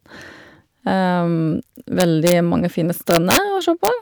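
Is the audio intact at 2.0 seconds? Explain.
No. Integer overflow runs from 2.00 to 2.32 s, just before "mange fine": loud speech peaks exceed the largest integer value and, instead of being limited, wrap to the opposite sign, jumping across the full range. The result is violent cracks, far harsher than clipping.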